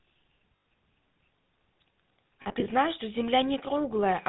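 The whole speech clip carries the GSM full-rate codec's buzzy, gravelly roughness and nothing above 4 kHz, which fits 13 kbps GSM squeezing the voice through pulse-driven vocal-tract modelling. Lost GSM frames hit at 0.56 to 0.66 s, where about 100 ms is patched by repeating the last good frame, giving a brief metallic ring. From 2.42 to 2.68 s, 140 ms of losses are spread as short gaps of up to around 40 ms each, which sound like rough, ringing stutters.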